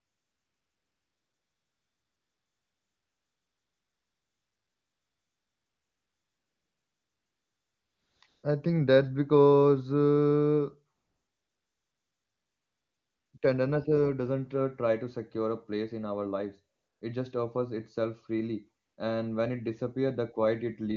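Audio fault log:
0.00–8.21 s, 8.27–8.43 s, 10.95–13.33 s, 13.37–13.41 s, 16.75–17.01 s, 18.83–18.97 s: AMR comfort noise. The phone treated these stretches as silence and stopped sending speech frames, so the receiver made up filler noise from a rough estimate of the background's level and spectrum. The real room sound gives way to a smooth, even hiss that switches on and off at each boundary.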